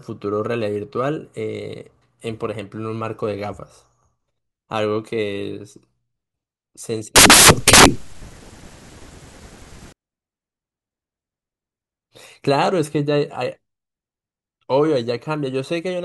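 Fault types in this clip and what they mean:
Samples built from the wrong bytes: each sample's bytes get put together wrongly, so the fast-changing low bits take over, giving loud, harsh broadband noise from 7.16 to 9.92 s.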